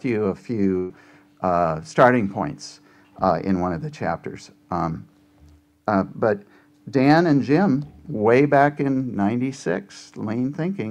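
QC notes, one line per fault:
0.77 to 0.91 s, burst of packet loss: a run of consecutive packets went missing or arrived too late for playback, leaving a hole of about 120 ms. The receiver's concealment filled the gap by extending the last decoded sound and attenuating it as the gap went on, so there is no dead silence, just a smeared, decaying continuation. Playback then resumes further along, and the 120 ms of audio that belonged in the gap is gone.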